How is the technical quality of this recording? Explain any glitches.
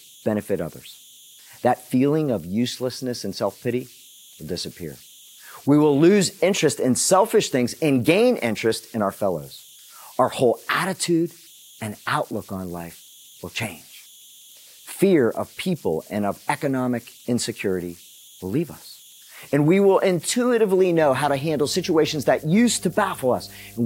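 The recording has two technical faults: a faint tonal whistle under the speech throughout, and a low hum that appears near the end.

Converter idle tones run through the whole clip. An undithered delta-sigma converter, given very small input, settles into repeating bit patterns, and those patterns produce a tone instead of random noise. Here the tone sits around 3 kHz, about 28 dB below the speech. It is heard as a thin whistle in the pauses and as a grainy edge beneath quieter speech.

Mains hum enters at 20.98 s and continues to the end at 23.85 s. Power-line current leaks into the signal, likely through a ground loop or a nearby transformer, and adds a steady 50 Hz tone with a few low harmonics. At roughly 25 dB below the speech, it is a low drone under the final few seconds.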